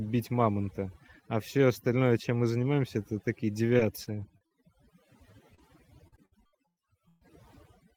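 Throughout, the background sinks to near silence with twinkling specks: overdone noise removal, where aggressive noise reduction cut individual frequency bands along with quiet speech detail.

From 3.77 to 4.53 s, just after "мы занимаемся это такие", the speech turns choppy and robotic. This is repeated packet loss: five short holes, the longest about 40 ms, were each patched by extending the preceding sound, covering about 15% of the stretch.

At 5.55 to 5.60 s a brief smear is heard, a short concealed packet loss where about 20 ms never arrived and was filled by continuing the last sound. From 5.58 to 5.60 s the tail of that stretch is rougher and noisier. That is a lost packet rebuilt from error correction, with a low-bitrate copy of about 20 ms played in its place.

From 6.08 to 7.23 s the robotic, broken texture returns more heavily. This is repeated packet loss again: seven gaps, the longest about 123 ms, concealed by repetition across about 34% of the span.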